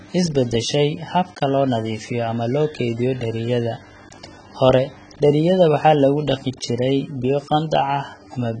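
From start to finish the speech is band-limited, with nothing above about 9.3 kHz, and sounds dull and smeared. Sibilants turn fizzy and sustained vowels carry a warbling texture. This is likely heavy AAC compression, AAC-LC at a bitrate low enough to suggest around 16 kbps. To save bits, the encoder lowered its cut-off and quantised the remaining spectrum coarsely, leaving gaps and noisy fill in the upper bands.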